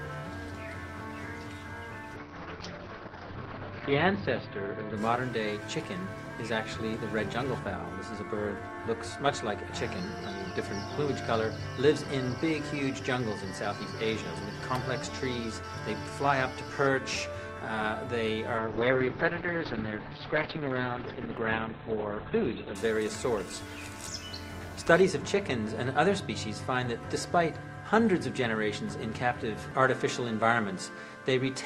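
The sound turns rough and muffled from 2.16 to 5.77 s, with the top end falling to about 6 kHz, and again from 18.58 to 22.81 s, down to about 4 kHz. Each is a call bitrate drop: the encoder coded far more coarsely and trimmed the highs, consistent with a fall from roughly 48 to 7 kbps.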